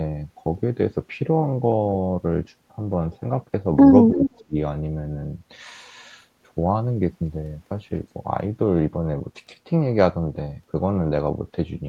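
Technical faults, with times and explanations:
4.11–4.23 s and 4.46–4.56 s, speech suppressed in double talk: the speech dips briefly in both spots, each time for about a tenth of a second. The first dip is shallow, around 10 dB. The second goes much deeper, roughly 30 dB, so it nearly cuts out. The likely cause is the far side talking at the same moment, which left the echo canceller unable to tell this talker from its own loudspeaker echo, so it turned everything down.
4.22–4.44 s, echo leak: a faint, delayed copy of the speech sneaks in right after the first dip. It lags by about 331 ms and sits roughly 10 dB under the direct speech, so it comes across as a ghost trailing the talker. That most likely points to a loudspeaker on the other end whose echo canceller didn't fully scrub what its mic picked up, so some of it got sent back.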